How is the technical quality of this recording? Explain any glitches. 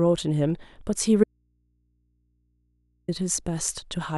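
The recording has one clear technical fault, an audio dropout to a faint residue, that breaks the speech for nearly two seconds.

From 1.24 s to 3.08 s, about 1.8 s, the speech cuts out abruptly and returns just as suddenly. The likely cause is a brief loss of the source feeding a chain that stayed powered, leaving an open input. The gap holds only mains hum, around 45 dB below the speech. A natural pause or fade would instead taper off and keep room tone rather than hum.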